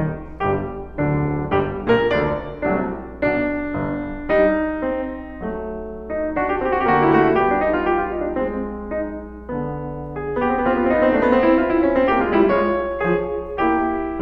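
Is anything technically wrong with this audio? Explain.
Yes, the music carries mains hum from start to finish. The power line has coupled into the signal, most likely through a ground loop or a nearby transformer, and left a steady 60 Hz tone with a few low harmonics underneath everything. It sits around 20 dB below the music, so it is heard as a constant low drone.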